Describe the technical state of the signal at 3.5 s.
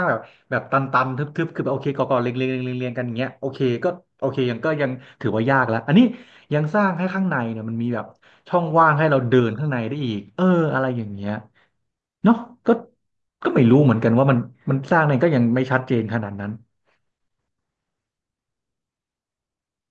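At 3.5 s the speech signal is intact, with no audible fault at that moment.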